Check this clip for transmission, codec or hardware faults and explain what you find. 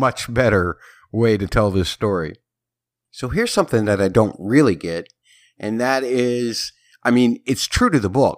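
No fault audible anywhere in the recording; nothing to report.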